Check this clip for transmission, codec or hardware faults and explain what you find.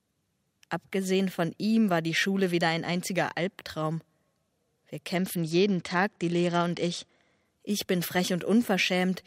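One fault is present. From 5.15 to 7.45 s the treble turns dull and a gritty grain rises beneath the sound, then clears. This is a Bluetooth SBC bit pool drop. A congested link forced fewer bits per frame, starving the top sub-bands and coarsely quantising the rest. The damage fits a drop from a bit pool around 28 to about 10, near 84 kbps.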